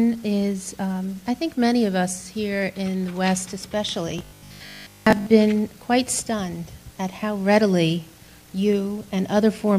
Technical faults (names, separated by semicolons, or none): robotic sound from repeated short buffers